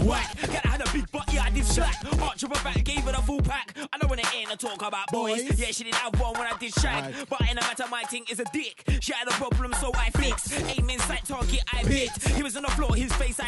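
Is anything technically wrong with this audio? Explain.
No, there's nothing technically wrong with this audio. No fault can be heard anywhere in the clip.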